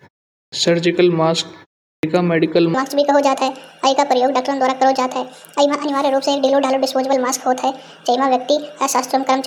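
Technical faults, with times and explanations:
0.41 s and 1.91 s: clipped start after a pause. After silences of about 0.41 s and 0.34 s, the output device had dropped into a sleep state and needed time to wake, so the opening 114 ms and 122 ms of speech vanish and words begin abruptly, already mid-sound.
2.74 s to 9.47 s: section at the wrong speed. The playback clock likely ran fast from here to the end, at 1.63 times the recorded rate, so speed and pitch rise together: the speech turns hurried and sits roughly ten semitones higher, unnaturally thin and chipmunk-like.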